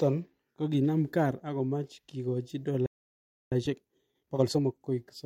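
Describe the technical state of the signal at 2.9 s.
The player likely starved of data or was blocked, causing a playback stall: after "kokinam kaar akomach kikochi" the speech falls silent from 2.86 to 3.52 s, about 0.65 s.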